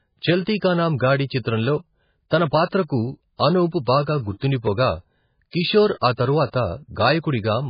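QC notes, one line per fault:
Throughout, MP3 compression: The speech has nothing above 5 kHz, so it sounds dull and boxed in. The damage is heavy. It has a watery, swirling texture because weak frequency lines drop in and out from one frame to the next. The encoder likely ran very short of bits, which fits a bitrate around 16 kbps. To save bits it cut the treble at a fixed point and zeroed out the quieter detail.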